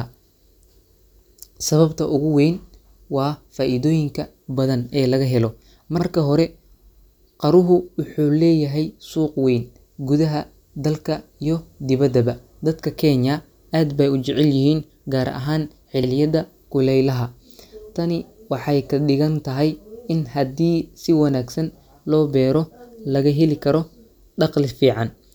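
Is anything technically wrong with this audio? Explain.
Yes. There are overlapping chunks at 5.99–6.03 s and 16.03–16.08 s. The speech was handled in 10-second chunks, each starting before the previous one ended. So about 48 ms replays at each join. It sounds like a brief stutter or click.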